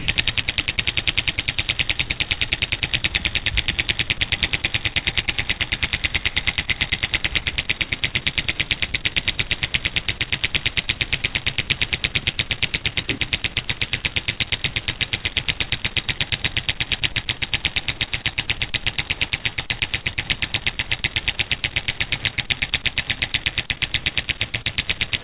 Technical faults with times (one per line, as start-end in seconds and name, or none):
0.00-0.78 sound chopped by the voice detector
1.36-3.68 sound chopped by the voice detector
4.30-4.32 sound dropped by the voice detector
4.94-25.24 sound chopped by the voice detector